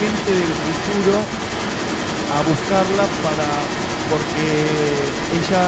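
Speech with an echo leak running through the whole clip, from 0.0 s to the end: a delayed copy of the voice follows about 247 ms behind, only a little quieter than the direct speech. The likely cause is a far-end loudspeaker whose echo canceller failed to remove what its microphone picked up.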